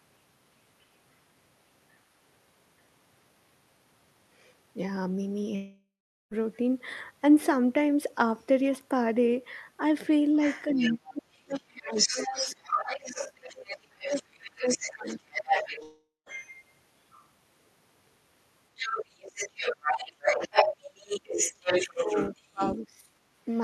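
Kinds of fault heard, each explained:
Long network dropout: Twice the audio simply stops arriving, most likely from a network gap. From 5.55 to 6.34 s about 0.76 s goes missing: the last sound is stretched into a fading buzz, then roughly 0.4 s of near-silence. Around 15.83 to 16.29 s it happens again, with about 0.44 s lost and a shorter quiet tail. In both cases the speech picks up further on, with the missing piece just gone.
Other side's voice leaking through: A second voice bleeds into the talker's channel, likely loudspeaker pickup the echo canceller didn't fully remove. It shows at 10.44 to 11.14 s, about 10 dB under the speech, then 11.50 to 16.64 s at about 5 dB under. There are faint scraps at 17.12 to 17.26 s and 23.49 to 23.60 s, about 30 and 35 dB down. From 18.77 to 22.78 s it sits at roughly the same level as the talker.
Speech suppressed in double talk: While that other voice is present, the talker gets pushed down, likely because the canceller can't tell the two apart and turns both down. 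Between 10.67 and 15.26 s the speech keeps dipping and breaking up, about 3 s in total, with the deepest drop around 35 dB. From 22.05 to 23.02 s there's a shorter patch of around half a second, dropping as much as about 25 dB.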